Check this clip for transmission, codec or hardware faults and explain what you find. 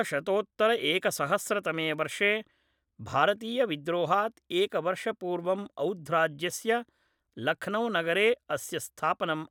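One fault is present, a bit error spike at 1.94 s. A single bit flipped in memory or on a digital link, so one sample's value jumped by a power of two and then returned. That lone spike, reaching about -40 dBFS, is heard as one brief, broadband tick unrelated to the speech.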